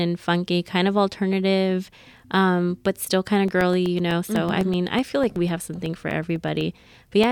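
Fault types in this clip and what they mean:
Periodic USB or driver dropouts: something in the system is interrupting the USB bus or audio driver on a fixed schedule, and each interruption leaves a gap of roughly a millisecond filled with silence. After "but still kind of", from 3.48 s to 7.24 s, this speech carries a steady ticking every 0.125 s, eight per second and around thirty in all, heard as small clicks riding on the voice wherever sound is present.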